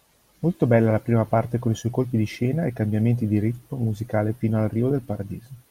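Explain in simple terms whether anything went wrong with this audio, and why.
Nothing went wrong here: the speech comes across as one steady, continuous recording with no technical faults to point to.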